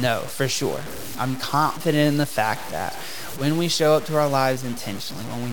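Low bit depth without dither runs through the whole speech clip: a grainy, gritty distortion that tracks every syllable and sits only about 15 dB below the speech. It likely comes from truncation to around five bits with no dither, so rounding error follows the signal and quiet tails sputter.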